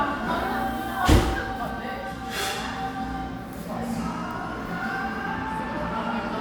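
Nothing here trips any alarms; the sounds come across without any technical trouble worth pointing out.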